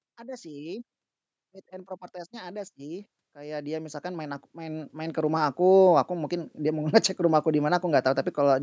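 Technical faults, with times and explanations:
1.69–5.58 s, automatic gain rising: the automatic gain control found the input too quiet and raised its gain by about 15 dB over nearly four seconds, so speech and background swell together before "aku mungkin". On the waveform, the envelope widens steadily, and the spectrogram brightens evenly below 8 kHz.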